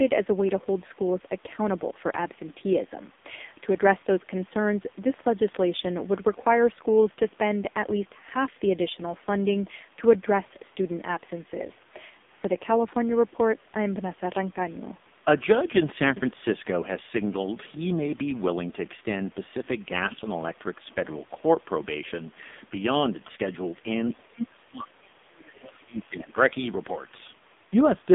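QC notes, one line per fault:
throughout: AMR narrowband mobile codec. The speech is boxed into a telephone band of about 200 Hz to 3.6 kHz with nothing above 3.7 kHz, so sibilants are dull and the voice sounds thin and buzzy, with a synthetic, coarse edge. That fits AMR-NB at a low 5.9 kbps mode, where the codec rebuilds speech from a vocal-tract model excited by only a few pulses per sub-frame, and at this rate the damage is heavy.
24.11 to 26.37 s: speech suppressed in double talk. Over these two seconds or so the talker's level sags and breaks up in patches, at its deepest by roughly 25 dB, so parts of the speech thin out or vanish. The likely cause is an echo canceller that heard both ends at once, could not tell the near talker from the loudspeaker echo, and attenuated everything together.
25.44 to 25.49 s: other side's voice leaking through. Inside that suppressed stretch a brief, faint scrap of a second voice slips in for about 50 ms, sitting very low, around 30 dB under the main speech. 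This is likely far-end audio from the loudspeaker that reached the microphone and was not fully cancelled, so a fragment of the other party survives in the send path.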